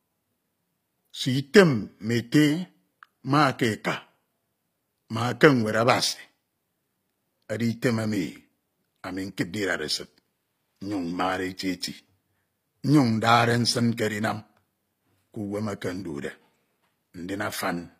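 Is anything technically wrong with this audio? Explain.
Yes. Throughout the speech, s sounds turn gritty and metallic, and nothing reaches above 15.5 kHz. Likely HE-AAC compression, which rebuilds the treble from copied lower bands at a low bitrate.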